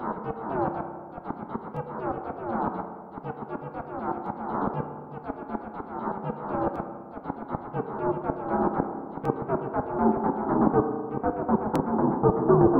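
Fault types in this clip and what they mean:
Clock drift buffer slips: clicks recur every 2.5 s, from 1.77 s to 11.76 s, about five in all. Their steady spacing, unlike scattered dropout glitches, likely comes from two clocks differing by roughly 500 ppm, each slip dropping or repeating around 70 samples.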